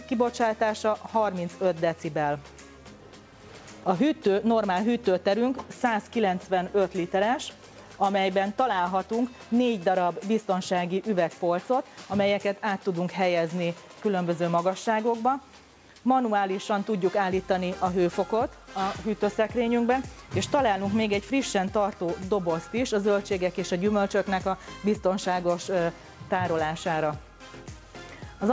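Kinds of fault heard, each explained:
No faults are audible: the signal shows only the expected traits of a call chain, with the lowest bass trimmed by the call microphone processing and no content above 8 kHz after the WebRTC call path, which fits a wideband codec such as G.722.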